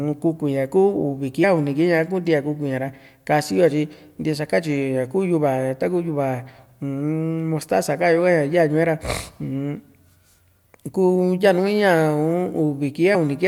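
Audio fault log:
1.42 s and 13.14 s, compressed frames skipped: at each point the speech jumps ahead by about 40 ms, which fits roughly two whole frames of the compressed stream being dropped or rejected as damaged by the decoder. A spectrogram shows a sudden discontinuity in the harmonic pattern, and the waveform's envelope steps abruptly.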